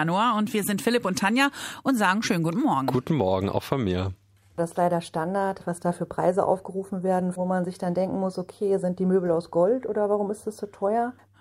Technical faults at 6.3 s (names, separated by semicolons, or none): none